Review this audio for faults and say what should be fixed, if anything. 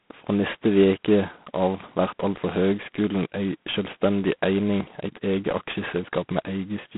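The speech went through G.726 ADPCM coding at a very low rate. Each sample is sent as only a few bits describing its difference from an adaptive prediction, and the coarse steps leave heavy quantisation noise. Here that shows up as a harsh, rasping hiss that rises and falls with the speech level, which fits 16 kbit/s. The band is also narrowed to telephone width, roughly 150 Hz to 3.4 kHz, with nothing at all above 3.8 kHz, so the speech sounds thin and gritty throughout. To prevent this, route the call over a wideband codec, or at least over G.726 at 32 kbit/s rather than 16 kbit/s.

At 4.8 s there is a skip where audio is missing between chunks. The likely cause is a recorder or processor working in blocks that drops a short stretch while it closes one chunk and opens the next, which fits chunks of about 3 s. Roughly 40 ms of speech is gone, and the audio on either side is butted together with no gap, so the speech jumps forward abruptly. 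To prevent this, use double buffering so each new chunk is already capturing before the previous one is closed.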